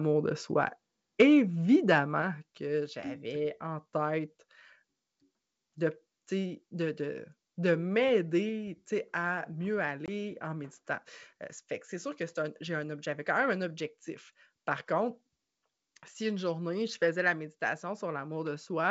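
Microphone overload at 1.2–1.25 s in this wideband G.722 speech recording at 64 kbit/s: the loudest peak crackles harshly, flattened by about 5 dB over full scale across roughly a tenth of its samples, likely from input gain set too high for the converter. Microphone volume stepped down at 1.22 s by about 2 dB and again at 2.22 s by about 5 dB: voice and background drop abruptly, probably the call software cutting the device's input gain. Packet loss on an ADPCM call at 10.06–10.09 s: a hard-edged 20 ms hole, about two packets' worth, leaves the decoder's adaptive predictor and step size out of step, so the speech returns slightly distorted before settling.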